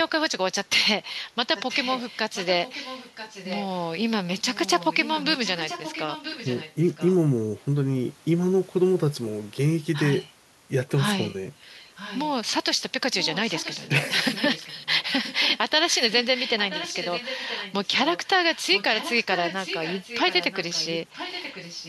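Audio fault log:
1.56–3.85 s, 4.54–7.13 s, 11.96–12.29 s, 13.2–15.58 s, 15.89–21.88 s: echo leak. Likely the far-end echo canceller passing loudspeaker pickup back, so the speech returns 980 ms late, about 15 dB down, rising to about 10 dB down in the last stretch.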